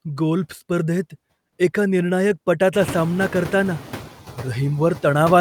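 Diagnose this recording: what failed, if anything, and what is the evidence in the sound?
Noise suppressor artifacts are present throughout, introduced at the call-processing stage. The suppressor estimates the steady background as noise and pulls those bands down by about 10 dB frame by frame. The residue therefore drops in the pauses and returns beneath the speech, so the background pumps with the talker. This is easiest to hear after the room noise itself jumps by about 21 dB around two and a half seconds, where it sits about 17 dB under the speech. On a spectrogram, the noise floor darkens in the gaps between syllables and brightens under voiced regions. A waveform shows the matching dips in the low-level background.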